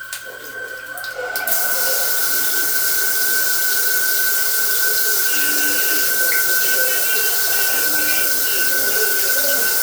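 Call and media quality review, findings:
No faults found on listening; nothing in the audio path needs action.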